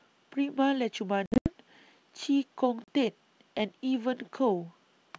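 Between 1.26 and 1.50 s the speech breaks up from packet loss on an ADPCM call: about 160 ms of audio drops out in several hard-edged gaps spread over 200 ms, the longest lasting 80 ms. A shorter 40 ms hole follows at 2.84 to 2.89 s. On the waveform these are flat silent stretches with abrupt edges. A spectrogram shows them as clean vertical blank bands across the full wideband range up to 7 kHz that the G.722 coding carries.

Each gap is silence inserted in place of the missing packets. The receiving decoder's adaptive predictor and step size drift away from the sender's during the gap, so when the speech resumes it comes back slightly distorted. The mismatch settles within some tens of milliseconds.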